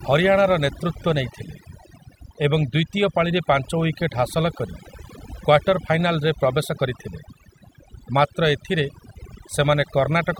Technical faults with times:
0.00-10.39 overdone noise removal

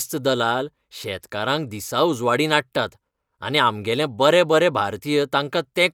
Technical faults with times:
none

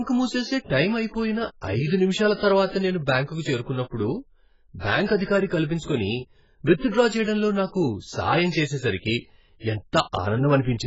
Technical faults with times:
0.00-10.86 AAC compression

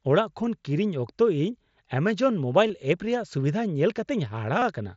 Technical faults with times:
2.68-2.70 concealed Bluetooth headset packet loss
4.59-4.62 concealed Bluetooth headset packet loss

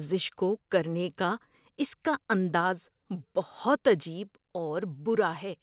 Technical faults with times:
2.61 microphone volume stepped down
4.23 microphone volume stepped down

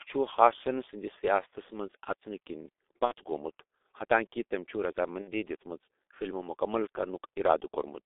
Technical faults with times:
0.00-8.06 G.723.1 codec
3.05-3.13 VoIP packet loss concealed by the speech codec
5.22-5.31 VoIP packet loss concealed by the speech codec

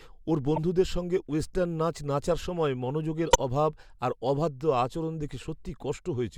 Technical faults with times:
0.56-0.58 corrupt frame decoded
3.28-3.39 corrupt frame decoded

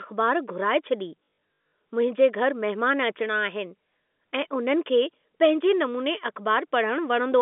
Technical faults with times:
1.21-1.72 packet loss with last packet repeated

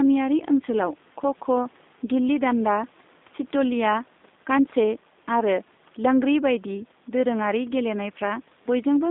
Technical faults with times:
0.00-9.10 G.729 codec

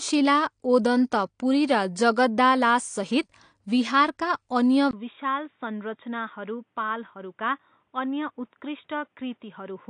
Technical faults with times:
0.00-9.89 AAC compression
4.91-9.89 input switched to a poorer device

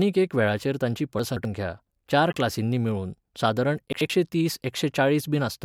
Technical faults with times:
1.19-1.45 chunks out of order
2.30-2.35 corrupt frame decoded
3.93-4.10 chunks out of order

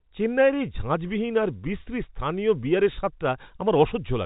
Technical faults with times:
none

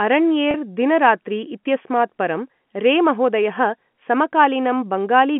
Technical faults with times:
0.51-0.54 packet loss with pitch repetition

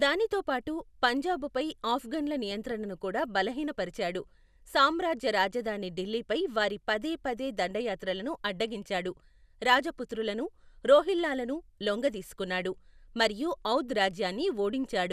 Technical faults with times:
2.51-2.72 DAB burbling

